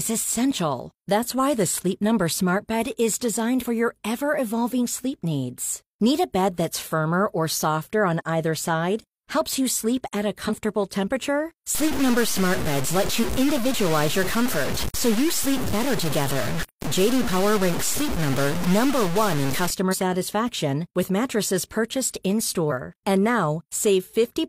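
At 3.58 to 3.64 s, and again at 10.45 to 10.51 s, the speech is broken by short glitches of about 60 ms. These come from damaged data in a compressed stream: corrupted bytes make the decoder misread frames, lose sync and hunt for the next frame header.

From 11.75 to 19.70 s the speech turns coarse and grainy, with distortion that moves with every syllable. Quiet passages sputter or fall silent between steps, and the error sits nearly as loud as the speech itself. This points to low bit depth without dither, likely truncation to around 3 bits. Unlike clipping, the grit is worst on the quietest sounds, not the loudest peaks.

Inside that stretch, at 13.19 to 13.25 s, another stream-damage glitch cuts through the grain. Two more follow, at 19.88 to 19.95 s and at 22.67 to 22.72 s.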